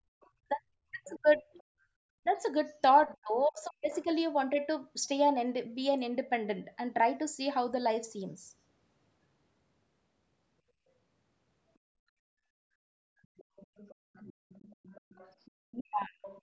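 From 0.21 to 1.63 s a second, fainter voice sits under the speech, roughly 25 dB down. This is the other side's voice leaking through, likely because the echo canceller left loudspeaker sound in the microphone. It is a separate talker rather than a delayed copy of the same one. Overlapping it, from 0.35 to 4.08 s, the main speech is suppressed in double talk. Across about a second and a half in total it dips sharply, by up to about 40 dB, likely while the other side is talking. From 1.72 to 1.86 s the background is gated by the echo canceller, dropping by about 28 dB for a brief moment. Here only the room sound vanishes and then returns. A quieter leak comes at 3.93 to 4.06 s. A long one runs from 13.23 to 16.41 s, with the speech suppressed again between 15.69 and 16.24 s. Everything stays below 8 kHz, as the call's microphone processing passes it.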